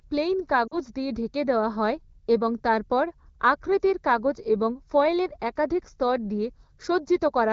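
Throughout, channel delay (comb filtering) makes the sound hollow and phasey. One channel runs roughly a fraction of a millisecond late, and mono summing cuts fixed notches starting around 3 kHz. Unlike codec band-limiting, the notches are fixed and evenly spaced.

From 0.67 to 0.78 s, lost AMR speech frames leave about 40 ms of audio concealed, which fits two dropped frames. The AMR-WB decoder repeats its last settings at falling gain, so the sound drops to near silence within the two frames and returns weak for a moment.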